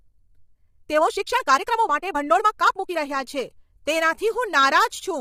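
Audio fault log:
Throughout: low-delay AAC compression. The speech sounds rough and grainy, with noise filling the gaps between harmonics and a thin, synthetic top end. The likely cause is heavy AAC-ELD coding, whose short frames resolve pitch poorly at a bitrate that fits about 24 kbps.
0.00 to 2.96 s: time-stretched section. The speech runs about 1.51 times faster than normal, sounding rushed while the pitch stays unchanged, and then the pace settles abruptly. This is likely stretching software dropping short pieces to shorten the audio without raising the pitch.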